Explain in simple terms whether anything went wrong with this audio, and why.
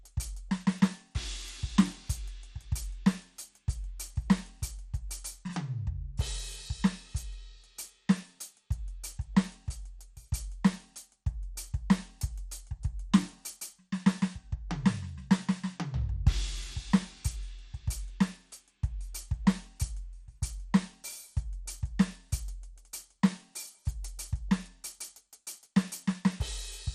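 The music sounds dull and gurgly from start to finish, with nothing above 14.3 kHz, likely from heavy MP2 compression switching off upper bands and coarsening the rest.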